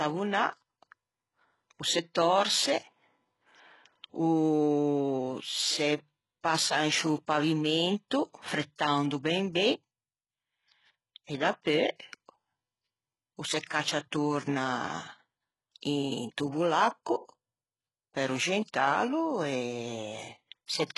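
A speech recording that was likely squeezed through HE-AAC compression at a very low bitrate, around 12 kbps by the heaviness of the damage, throughout. The treble is rebuilt from copied lower bands, so sibilants sound gritty and lispy, and nothing remains above 11.5 kHz.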